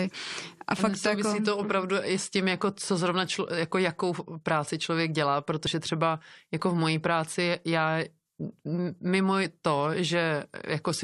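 At 5.65 s and again at 9.44 s, the speech is broken by brief glitches caused by damaged data in a compressed stream. The decoder misreads corrupted frames and loses sync until the next header. Each is a glitch under 20 ms.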